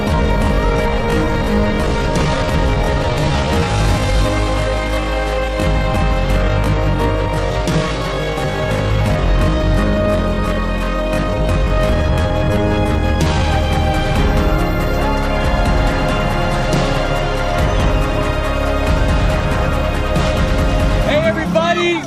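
Software likely stretched the opening 0 to 13.44 s to 0.62 times speed, a time-stretched section whose repeated fragments make the audio drag while pitch holds steady.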